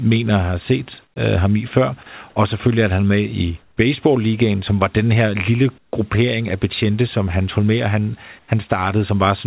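Comfort noise in place of the background appears first from 1.04 to 1.16 s, between "har set" and "øh ham i før". The sender's voice detector likely judged the gap silent and stopped transmitting, so the receiver filled it with synthetic noise. The room's real background, sitting about 40 dB below the loud parts, gives way to a flat, featureless hiss about 9 dB quieter for 120 ms. The same swap recurs at 3.62 to 3.77 s (150 ms, about 8 dB quieter) and at 5.78 to 5.93 s, after "var den her lille" (150 ms, about 14 dB quieter, the largest dip). It happens once more at 8.39 to 8.48 s (90 ms), where the drop is only about 2 dB but the texture still goes smooth.

An onset clipped by the voice detector follows at 5.91 to 5.93 s, at the start of "gruppering af betjente som". The detector was likely slow to register that speech had resumed, so the first 20 ms were never sent and comfort noise stood in for them. 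As a result, the word begins abruptly, without its soft lead-in. Throughout, nothing is heard above 4 kHz, which fits a G.711 call path at 64 kbps.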